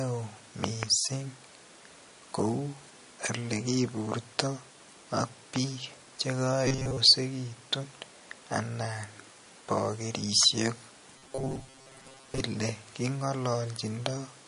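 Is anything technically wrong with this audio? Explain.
Yes, the speech has three kinds of technical fault.

MP3 compression runs through the whole clip, and the damage is plainly audible. The sound has a watery, swirling quality with smeared consonant attacks. This is likely a bitrate starved encoder, which fits roughly 40 kbps. Short of bits, it lets weak frequency lines flicker on and off between frames.

Loud pops occur at 0.64 to 0.85 s and at 5.56 to 5.58 s. The first span holds two pops in quick succession, peaking about 20 dB above the speech. The second is a single pop about 15 dB above it. The speech continues underneath each one. These are likely sudden voltage steps, such as a plug, switch, static discharge or driver glitch, that the downstream circuitry shapes into sharp thumps.

Robotic sound from repeated short buffers appears at 6.68 to 6.99 s and again, longer, at 11.18 to 12.42 s. 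In both spans a rigid, metallic buzz at 133 Hz follows the speech only roughly. Most of the audio there is repeats rather than new material. The likely cause is late-arriving audio padded by looping the last fragment, which fits a buffer of about 7.5 ms.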